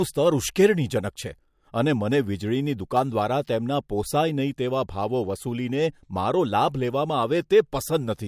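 No technical faults can be heard anywhere in the recording, and the signal holds steady for its whole duration.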